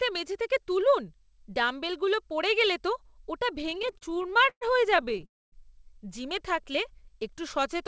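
From 3.59 to 5.25 s, packets reach the receiver late or too slowly, so the jitter buffer keeps running dry. This produces repeated stalls (stutter): 28 short gaps are padded by stretching the last sound, the longest lasting 120 ms. About a quarter of that span is concealment, so the speech drags and stutters, though nothing is lost.

At 5.25 s a call audio freeze follows, with its likely cause being packets held up in transit long enough to empty the buffer. The sound holds and fades, then stays silent for 240 ms. It resumes at 5.55 s exactly where it stopped, after a 266 ms inserted gap.

From 6.44 to 7.74 s the jitter buffer slow-down begins, as the receiver rebuilds its reserve by repeating single pitch periods and bits of pauses. This adds 44 ms, so the speech plays at 97% speed with no change in pitch. Sounds are slightly drawn out.

Throughout, the call path removes everything above 8 kHz, which fits a wideband codec such as G.722.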